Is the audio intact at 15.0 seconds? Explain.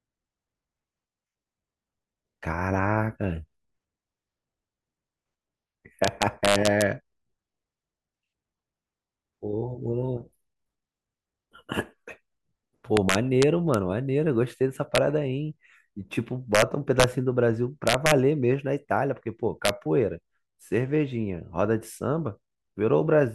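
No. An integer overflow occurs from 14.95 to 14.98 s: peaks in the speech pushed about 1 dB past the largest integer value and wrapped to the opposite sign instead of being limited, producing a brief, violent crack far sharper than ordinary clipping.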